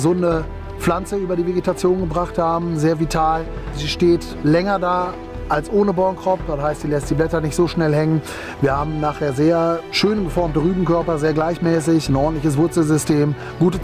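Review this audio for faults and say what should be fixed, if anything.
Nothing stood out on listening, so there is nothing here that needs fixing.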